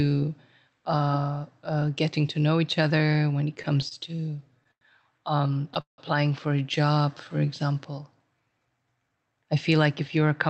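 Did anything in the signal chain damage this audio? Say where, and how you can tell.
Yes. The damage happened in the network and jitter-buffer stage of a call path. Repeated stalls (stutter) occur from 3.55 to 4.84 s and again from 5.47 to 6.01 s. Packets arrived late, the buffer ran dry, and the receiver stretched the last sound to fill 12 gaps (longest 98 ms) and then 5 gaps (longest 170 ms). Nothing is lost, but the speech drags. On a spectrogram the harmonics freeze into flat, smeared bands, and the longer fills taper in level.

A jitter buffer slow-down runs from 7.02 to 7.47 s. The buffer needed a reserve, so the receiver repeated single pitch periods and added 63 ms. That drops the speech to 88% speed with the pitch unchanged. You hear drawn-out vowels. A waveform shows identical pitch cycles copied back to back, and on a spectrogram the harmonic tracks stretch horizontally without shifting in frequency.

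A jitter buffer speed-up appears from 9.31 to 10.28 s. The buffer held too much audio, so the receiver cut short pitch-period pieces, about 70 ms in all. The speech runs at 107% and sounds hurried, at the same pitch. In the waveform, cycles are missing at periodic splice points. On the spectrogram, syllables look compressed in time and the formants are unchanged. The call codec itself is working normally: the spectrum stops at 8 kHz, which points to Opus at around 40 kbps.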